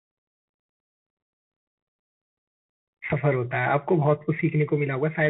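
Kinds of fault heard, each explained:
Bluetooth CVSD headset codec: a narrowband one-bit delta codec, likely at 64 kbps, crudely tracking the waveform, leaving plainly audible scratchy, hissy speech with nothing above about 3.8 kHz.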